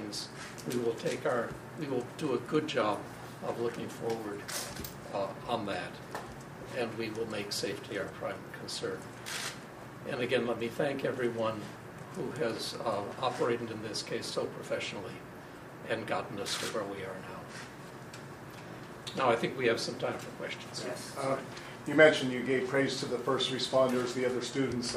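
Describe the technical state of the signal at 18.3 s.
The signal at 18.3 s is intact, with no fault audible at that moment.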